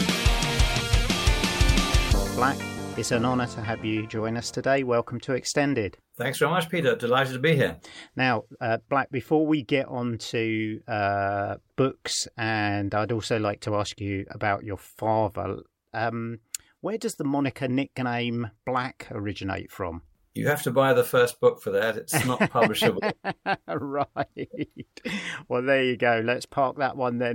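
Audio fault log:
No technical faults can be heard anywhere in the audio; the signal stays continuous and stable in level, timing and tone.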